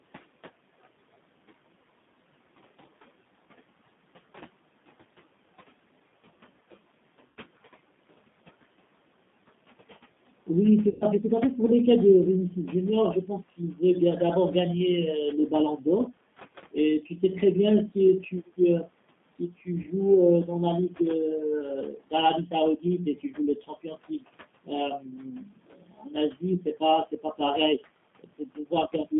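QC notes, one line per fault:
Throughout: G.729 codec. The speech is band-limited to roughly 150 Hz to 3.6 kHz, and nothing above that survives. It has the slightly rough, synthetic grain of a low-rate model coder, which fits 8 kbit/s G.729A. The codec does not send the waveform itself. It sends a vocal tract filter, a pitch predictor and a sparse pulse pattern for each short frame, and the decoder rebuilds the sound from those. That rebuild is why the damage is plainly audible. The room noise sits about 21 dB below the speech and also passes through this coding.
7.28–7.37 s, 10.89–11.06 s and 19.82–19.87 s: VoIP packet loss concealed by the speech codec. Audio went missing three times, about 80 ms, 120 ms and 20 ms. In each gap the decoder kept repeating its last pitch and filter at a falling gain. So the sound smears into a buzzy tone or coloured noise that fades. The 120 ms gap is the longest. 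Each frame builds on the one before, so the speech stays weak for a moment after audio resumes.
13.26–13.80 s, 15.49–16.07 s, 17.91–21.00 s and 21.91–29.13 s: speech cut by the noise suppressor. The suppressor mistook parts of the speech for background noise and turned them down along with it. The deepest drops are about 14, 8, 16 and 19 dB. The speech it turned down sounds swallowed or faint. The first two spans lose only about a tenth of a second each. The third loses about half a second. The last loses roughly three seconds.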